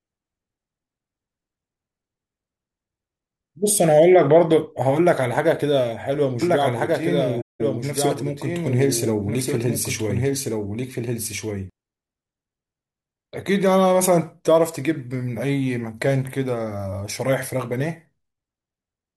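From 6.42 s to 11.70 s the speech is joined by a second copy of itself, trailing about one and a half seconds behind and roughly 5 dB quieter. It is full-band and dry, with no added room or tail, and it cuts in and out abruptly at those two points. This is a doubled audio track, likely caused by the same signal being mixed in a second time through a slower path, or by an edit that left two copies out of step.

Inside that stretch, from 7.41 s to 7.61 s, the sound fades down to silence and back up over a gap of about 0.19 s, with soft edges. This is AAC frame loss with muting. A run of compressed frames went missing, and the decoder replaced their spectral content with zeros. The overlapping transform windows then produced the gradual fade out and fade back in. The length of the hole fits about nine lost AAC frames.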